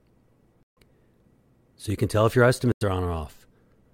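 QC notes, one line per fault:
0.63–0.78 s, corrupt frame muted: the sound cuts abruptly to dead silence for about 0.15 s and then resumes on schedule. Damaged compressed frames were rejected by the decoder and replaced with silence. The length points to roughly six frames of about 25 ms.
2.72–2.83 s, corrupt frame muted: right after "can tell if your", a sharp-edged gap of about 0.11 s drops out with no shift in timing afterwards. This is the same decoder concealment by silence, consistent with around four consecutive corrupted frames.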